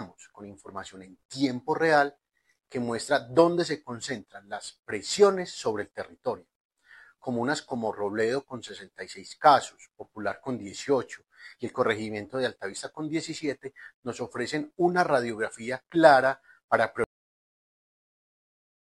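At 17.04 s the audio has a cut-off end: the final buffers were never written out, so the sound stops mid-event with no natural decay and falls straight to digital silence, which then holds for the remaining 1.85 s.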